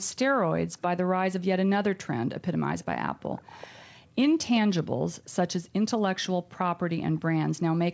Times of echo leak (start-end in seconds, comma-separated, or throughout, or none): 2.80-2.85, 3.19-3.86, 7.16-7.20